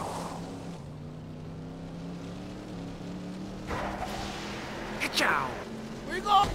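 No technical fault can be heard anywhere in this audio. Nothing in it points to a problem with how the sound was captured, processed or delivered.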